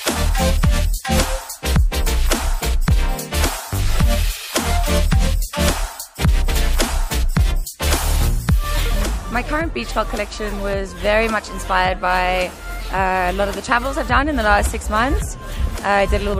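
From start to finish the signal has likely been through MP3 compression at a low bitrate, one that fits roughly 64 kbps. Starved of bits, the encoder drops weaker frequency lines, which flicker in and out between frames. The damage is plainly audible: there is a watery, swirling texture, metallic chirps sit on bright, hissy content, and sharp onsets are smeared.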